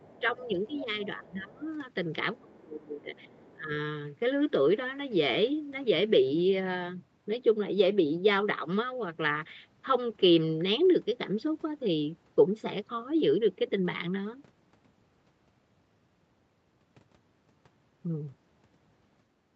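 From the start to 0.21 s a second voice sits faintly under the speech, roughly 30 dB down. This is the other side's voice leaking through. It is likely loudspeaker echo that the echo canceller failed to remove. It returns from 0.37 to 1.07 s, louder at around 20 dB below the speech. Brief scraps follow from 1.57 to 1.72 s, very faint, and again from 3.2 to 3.54 s, about 30 dB down.

Overlapping these, the main speech is suppressed in double talk. From 0.2 to 0.87 s it dips by a few decibels for about a third of a second. The likely cause is the canceller mistaking the talker for echo while both sides spoke, and pulling the level down. From 1.17 to 1.66 s the drop deepens to around 15 dB. From 2.39 to 3.72 s the speech sinks by about 25 dB across roughly a second.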